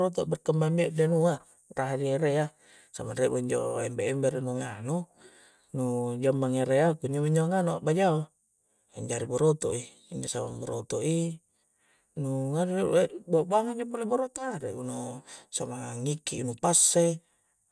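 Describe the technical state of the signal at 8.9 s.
At 8.9 s the speech signal is intact, with no audible fault at that moment.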